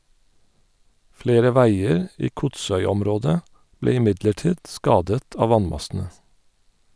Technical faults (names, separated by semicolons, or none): none